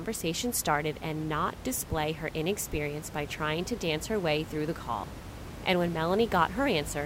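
No technical faults are audible anywhere in the recording.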